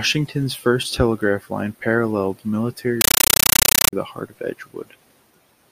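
At 3.01 s, just after "first telegraph line paralleled", a compressed AC-3 stream reaches the output undecoded and is played as audio: the receiving end treats the encoded frames as ordinary samples. Until 3.93 s the speech gives way to very loud, harsh chattering static. Each burst of noise lasts about 9.33 ms and is followed by silence, repeating 31.25 times a second, which matches AC-3 frame timing.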